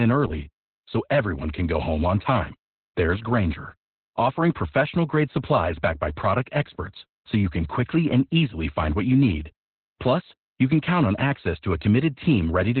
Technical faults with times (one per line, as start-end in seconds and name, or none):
0.00-12.80 Opus voice compression